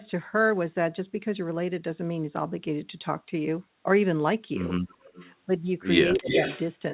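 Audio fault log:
4.88–5.34 s, echo leak: a faint delayed copy of the talker trails about 271 ms behind, well below the main sound, likely loudspeaker pickup the echo canceller missed.
6.15–6.28 s, speech suppressed in double talk: the talker drops sharply for roughly 150 ms, likely the canceller ducking everything while both sides spoke at once.
6.28–6.61 s, echo leak: a stronger return this time, about as loud as the talker and 278 ms late, likely residual loudspeaker echo sent straight back.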